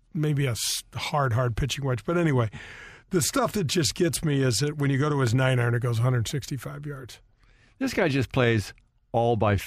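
Speech, no audible faults.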